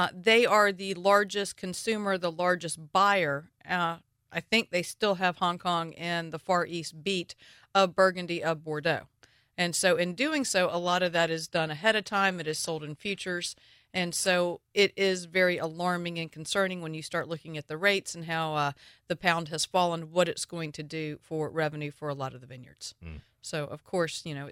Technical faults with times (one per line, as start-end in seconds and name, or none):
10.73-14.73 adaptive stream at a lower bitrate